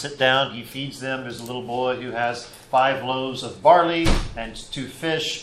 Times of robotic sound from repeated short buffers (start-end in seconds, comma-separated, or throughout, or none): none